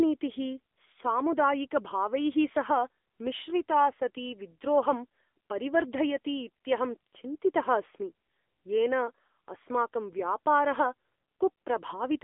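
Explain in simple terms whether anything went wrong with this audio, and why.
From start to finish the speech sounds like an old mobile phone call: thin, boxy and buzzy, with a plainly audible synthetic edge. Nothing comes through above about 3.8 kHz, and the deep tones are trimmed too, leaving roughly 250 Hz to 3.6 kHz. That is the AMR narrowband mobile codec, also called AMR-NB, at work. It keeps only a narrow slice of the sound and rebuilds the voice from a simple model of the throat, using very few bits.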